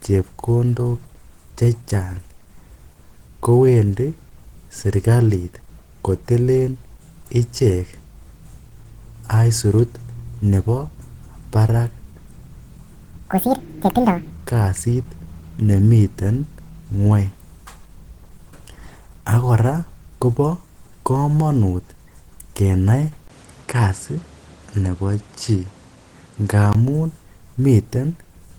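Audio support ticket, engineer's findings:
Opus compression, throughout: grainy, hoarse texture on the speech, plainly audible. Likely Opus hybrid mode at about 16 kbps; band energy is kept but fine detail is coarsely filled. Content reaches about 20.1 kHz.

Section at the wrong speed, 13.31–14.31 s: speech runs about 1.93× fast, pitch up by roughly ten semitones. Likely a playback or resampling clock mismatch on that one-second segment.

Input switched to a poorer device, 23.28–26.75 s: brief dropout of about 20 ms at 23.28 s, then a dull tone. A new noise floor sits roughly 30 dB under the speech, with no obvious level change. Likely a fallback to a narrower-band microphone or headset call profile.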